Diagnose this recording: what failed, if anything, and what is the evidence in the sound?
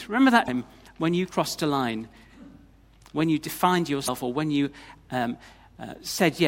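Codec stage: damaged data in the compressed stream gives brief disturbances at 0.45–0.49 s and 4.05–4.09 s, where the decoder misreads the frames and loses frame sync.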